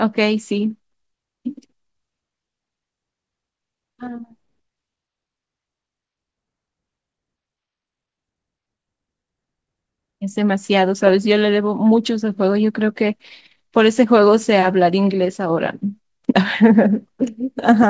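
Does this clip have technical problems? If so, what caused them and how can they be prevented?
No, this clip has no technical problems, so there is nothing to prevent.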